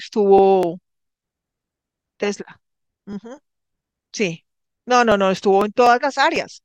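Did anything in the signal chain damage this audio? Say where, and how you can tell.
Yes. From 0.13 s to 6.36 s the speech carries small regular ticks about every 0.25 s, roughly four per second, heard only while sound is present. These are periodic USB or driver dropouts: at the driver or buffer stage, about a millisecond of audio is skipped at each interruption, leaving a splice click.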